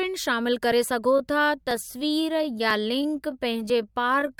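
At 1.10 s the speech abruptly slows to about 0.72 times its pace and stays slow to the end. The pitch does not drop. This is a time-stretched section, likely software lengthening the audio by repeating short pieces, which makes it drag.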